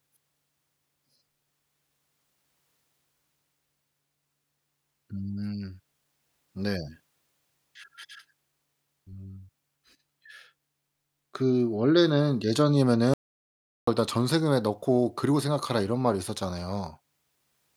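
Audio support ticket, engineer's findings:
Input path lost, likely a dropped link, device disconnect or momentary mute; recorder kept writing silence. Audio dropout to silence, 13.14 to 13.87 s, about 0.74 s. Speech cuts off mid-flow, gap is dead silence with no room tone, then resumes abruptly. Content in gap unrecoverable.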